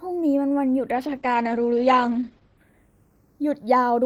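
Right from the start, the two channels are drifting apart. They sit on slightly different clocks, off by around 100 parts per million, so the delay between them slides to roughly a third of a millisecond by the end. Folded to mono, that moving comb gives a slow flanging swirl.

From 0.97 s to 2.65 s there's a call bitrate drop. The connection's bandwidth estimate fell and the encoder coded the speech far more coarsely, which fits a step from 32 down to 11 kbps, holding the low rate for about 1.6 s. The top end is cut at 8 kHz instead of 20 kHz, so the speech goes muffled, rough and watery until it recovers.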